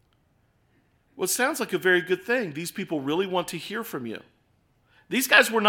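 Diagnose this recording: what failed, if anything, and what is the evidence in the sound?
Right after "to hear from you", at 4.21 s, the speech suddenly runs about 5% fast and sits roughly 89 cents sharp, just shy of a semitone, until it snaps back at 5.38 s. Speed and pitch move together, so this is a drift correction step at the driver or buffer stage, likely clock-matching software that jumped its playback rate in one go to drain or refill a buffer instead of easing it gradually.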